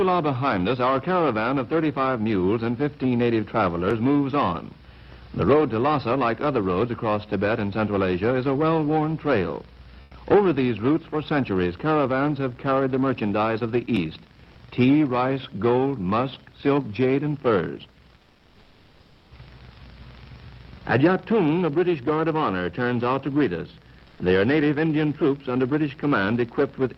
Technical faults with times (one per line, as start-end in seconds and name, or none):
10.03-10.11 comfort noise in place of the background
18.19-19.31 comfort noise in place of the background
24.07-24.19 comfort noise in place of the background